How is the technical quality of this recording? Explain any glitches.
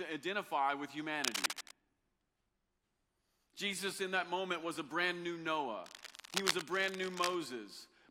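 The speech is marred by two bursts of cable scratch noise. Cable scratch noise at 1.24 to 1.71 s, after "identify with", and at 5.84 to 7.39 s, after "was a brand new", is likely a worn cable or connector being moved so its contact resistance fluctuates. It adds dense, uneven scratching, about as loud as the speech in the first burst and a little quieter in the second.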